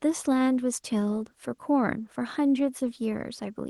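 Nothing stood out as a fault on listening to the speech in this recording.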